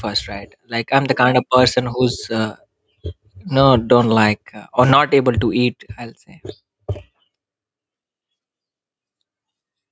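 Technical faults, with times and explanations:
Throughout, gain pumping: the gain ducks by about 10 dB under every loud syllable, squashing loud and soft together, likely from input gain set far too high against a fast limiter.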